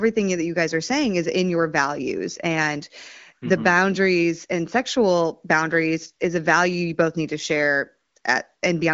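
Speech over the AMR wideband (HD Voice) codec at 15.85 kbit/s, with nothing above 7.5 kHz and only light coding artefacts; no technical fault is present.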